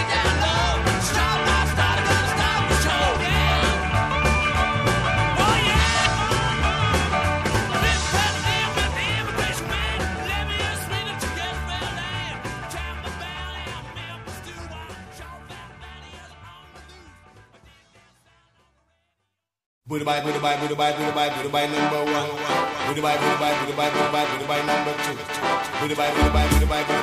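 Damaged data in a compressed stream shows up twice, at 3.12 to 3.17 s and again at 6.02 to 6.07 s, each a brief burst of about 44 ms heard as a chirp or blip cutting across the audio. Corrupted bytes in the encoded file make the decoder misread those frames and lose sync, so it emits garbled output until it locks onto the next valid frame header and normal decoding resumes.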